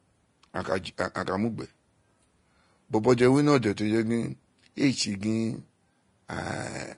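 From start to finish, the speech has nothing above 10.5 kHz. The upper range sounds hissy and grainy. Attacks blur and tones turn rough. The cause is likely Vorbis compression, with coarse quantisation replacing fine treble detail with noise. The damage fits a low bitrate near 32 kbps.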